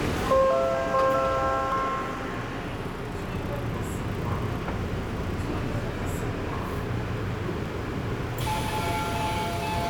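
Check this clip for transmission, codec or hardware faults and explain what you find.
Two brief skips occur, both audio missing between chunks. At 1.72 s and 7.66 s the sound jumps forward. A slice of roughly 20 ms was likely dropped as a recorder working in 2-second chunks closed one block and opened the next, and the two edges were butted together. The waveform shows an abrupt step with no silent gap, and the spectrogram shows a thin vertical line at each join.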